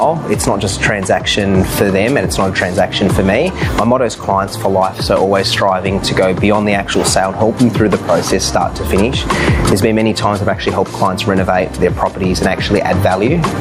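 Gain pumping runs through the whole clip. The level swings by roughly 15 dB. Loud and soft passages end up squashed close together. This is likely caused by input gain set far too high, with a fast limiter or compressor pulling it back on each peak. Unlike a noise gate, the compressor does not cut the gaps to silence.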